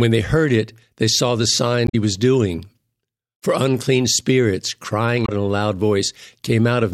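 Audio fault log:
1.84–1.95 s, damaged data in a compressed stream: a brief glitch after "it they saw the", before "was doing", as the decoder lost frame sync and resynchronised.
5.22–5.29 s, damaged data in a compressed stream: a short glitch after "unclean spirits" before "in a", where corrupted frames were misread and the decoder jumped to the next header.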